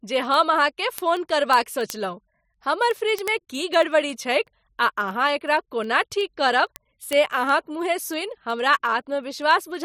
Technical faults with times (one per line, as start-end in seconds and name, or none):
0.16-9.79 word clock ticks